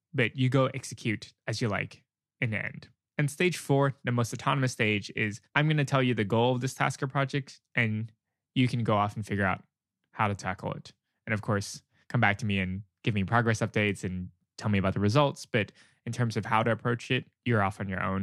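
Nothing in this recording stands out as a technical fault; the speech just runs along without anything catching the ear.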